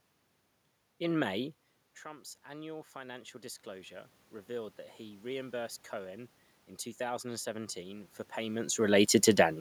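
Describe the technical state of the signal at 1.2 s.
At 1.2 s the signal is intact, with no technical fault, only the background noise of the room that belongs to the recording itself.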